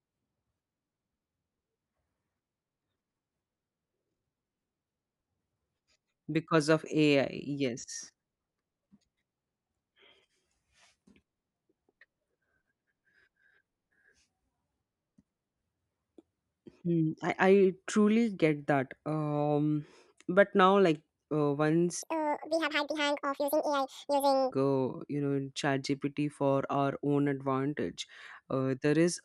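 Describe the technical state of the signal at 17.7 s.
At 17.7 s the speech signal is intact, with no fault present at that moment.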